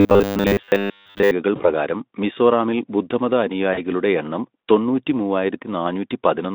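From 0.01 to 1.31 s the speech has robotic sound from repeated short buffers: a rigid, metallic buzz fixed at 100 Hz that only loosely tracks the speech. The likely cause is audio arriving late, with the last 10 ms segment replayed in place of most of the real signal.

At 1.55 to 1.73 s, just before "മിസോറാമിൽ ബുദ്ധമത", there is VoIP packet loss concealed by the speech codec. About 40 ms of signal is missing, which fits two 20 ms frames. The decoder extrapolates from its last state, producing a fading stretch before the voice recovers. The same concealment recurs at 3.73 to 3.80 s, between "മിസോറാമിൽ ബുദ്ധമത" and "എണ്ണം തൊണ്ണൂറ്റി", again bridging about 40 ms with a brief, weakened stretch. Throughout, the audio is confined to a narrow 200 Hz to 3.7 kHz telephone-style band.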